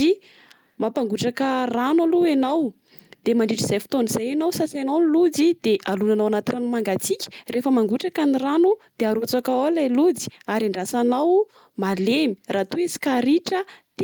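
Speech recording, with no audible technical faults anywhere.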